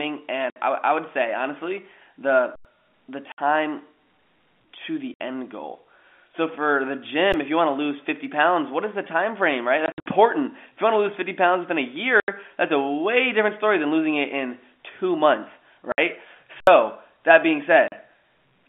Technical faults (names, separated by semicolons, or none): packet loss filled with silence; underrun with held sample